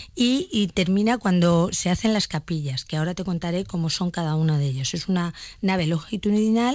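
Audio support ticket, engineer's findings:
No faults found: the speech passes through the WebRTC call path as expected, with nothing above 8 kHz, which fits a wideband call codec such as G.722 at 64 kbps.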